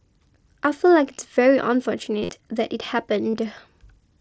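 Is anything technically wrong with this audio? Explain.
Yes. At 2.23 to 2.32 s, and briefly at 3.33 s, the speech turns to a brief buzzy, held tone with a slight warble as normal audio resumes. This is concealed Bluetooth headset packet loss: the receiver filled the missing packets by repeating recent waveform, about 60 ms lost at 2.23 s, with a longest run of about 45 ms. The wideband mSBC headset link carries the speech up to 8 kHz.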